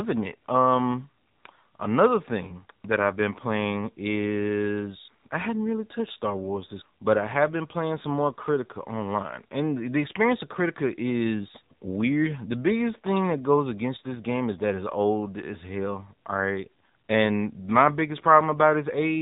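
From start to finish the speech carries AMR narrowband mobile codec damage: nothing above 3.8 kHz survives, and the voice turns buzzy and synthetic, fitting a low mode near 7.4 kbps. Unlike a plain low-pass filter, the pulse-driven vocal-tract model adds that artificial buzz.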